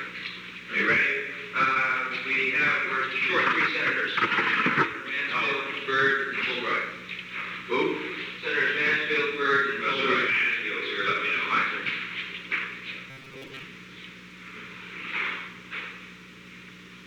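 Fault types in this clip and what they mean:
Robotic sound from repeated short buffers, 13.10 to 13.64 s: for about half a second the sound turns into a rigid, metallic buzz near 134 Hz that still loosely tracks the underlying audio. The likely cause is audio arriving too seldom, so the playback side loops a tiny slice, roughly 7.5 ms long to match that buzz, while the real signal in between is skipped. About half the material in that stretch is these repeats.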